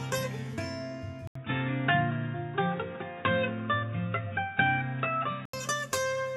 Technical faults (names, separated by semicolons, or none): input switched to a poorer device